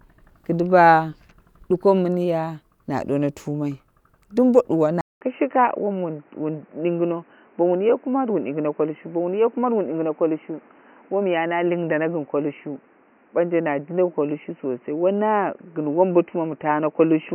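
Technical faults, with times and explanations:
5.01 s to the end, input switched to a poorer device: right after "duwoni tumai dumbo duwa" there's a 200 ms gap, then the speech returns boxy, with nothing above 3 kHz and new background noise about 35 dB down at similar loudness, likely a swap to a narrower-band mic.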